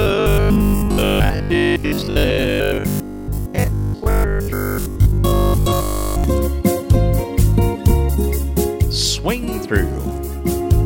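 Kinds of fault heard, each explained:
Robotic sound from repeated short buffers: from 0.02 s to 6.24 s the sound becomes a stiff, metallic buzz pinned at 50 Hz. That's likely playback looping a 20 ms chunk whenever fresh audio arrives late, so most of the real material gets skipped.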